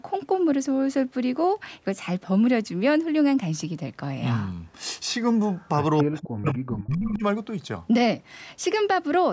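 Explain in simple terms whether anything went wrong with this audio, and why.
Two things went wrong, both in the second half.

An echo leak appears twice: a faint delayed copy of the speech at 5.53 to 5.68 s, arriving 0.26 s late, then a much louder one at 6.46 to 6.54 s, 0.31 s late. This likely happened because the far side's echo canceller let loudspeaker sound slip back into the call. Unlike a room echo, it is a separate, late repeat.

Speech suppressed in double talk occurs between 6.02 and 7.24 s. For about a second in total, the main talker's speech drops sharply, sometimes almost to silence. The likely cause is an echo canceller turning everything down while both sides spoke at once. The difference from the echo leak is that here sound goes missing rather than being added.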